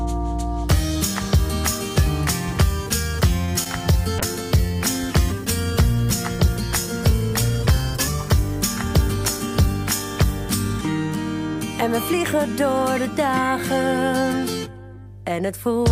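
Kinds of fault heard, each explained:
Mains hum: A ground loop or nearby transformer is leaking the power line into the signal, so a steady 50 Hz tone with low harmonics sits under the whole clip, roughly 20 dB below the wanted sound.
Short stall from a late packet: A packet arrived late and the jitter buffer ran dry, so the receiver held the last sound for about 23 ms, from 3.45 to 3.50 s, before resuming where it left off. Nothing is lost, but that moment drags briefly.
Short concealed packet loss: About 20 ms of audio never reached the decoder in time, so at 3.64 to 3.67 s the receiver extrapolated from the preceding sound and blended back in. This is heard as a quick smear.
Call bitrate drop: The call's bandwidth estimate fell, forcing the encoder to spend far fewer bits, which fits a drop from about 96 to 28 kbps. From 4.19 to 11.25 s the sound turns coarse and dulled, worst for roughly 5.5 s, before recovering.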